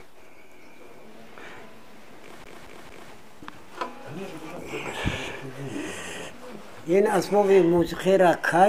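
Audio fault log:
2.44–3.12 s: CD stuck on one turn. The same 0.23 s of sound plays three times, each jump marked by a brief mute. The laser keeps skipping back one track.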